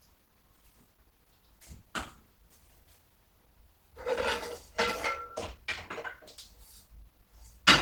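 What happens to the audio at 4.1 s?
At 4.1 s the sound is hoarse, grainy and muffled, as it is throughout the clip, likely from Opus compression at 16 kbps in its hybrid speech mode.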